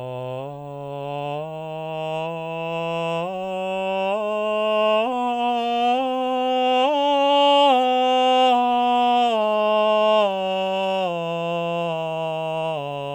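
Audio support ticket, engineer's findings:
No faults found on the music clip. Nothing to escalate on this ticket.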